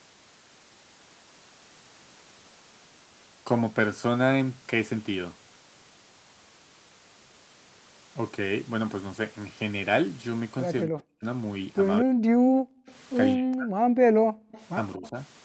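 From 10.85 to 11.25 s and again from 12.01 to 12.24 s, speech is suppressed in double talk: with both ends likely talking at once, the echo canceller cannot tell the local voice from loudspeaker echo and turns both down. The sound sinks by roughly 40 dB, dropping almost to nothing for a few hundred milliseconds.

From 12.52 to 12.86 s the background is gated by the echo canceller: while the loudspeaker plays, it clamps the microphone by about 40 dB, so the room sound vanishes for a third of a second and then returns.

At 12.86 to 12.95 s comes an echo leak, likely from residual loudspeaker pickup the canceller failed to remove. A faint copy of the sound follows 219 ms behind the original, sitting far below it as a brief ghost.

The same pattern repeats. From 13.36 to 13.79 s the speech is pushed down by roughly 40 dB, and from 14.07 to 14.51 s the background is gated again by about 40 dB. 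From 14.51 to 15.1 s a slightly stronger 219 ms echo trails the sound. Overlapping it, from 14.96 to 15.15 s, there is a shallower double-talk dip of around 15 dB.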